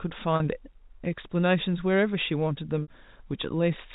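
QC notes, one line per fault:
0.36 to 0.40 s and 2.82 to 2.88 s, packet loss with pitch repetition. Two gaps of 40 ms and 60 ms, which fits two and three lost 20 ms packets. The receiver fills each gap by repeating the last pitch period and fading it out over about 50 ms. The 40 ms gap sounds like a brief, slightly buzzy held tone. The 60 ms gap outlasts the fade, so it dips toward silence before a short cross-fade brings the sound back. The surrounding G.711 telephone band stays steady.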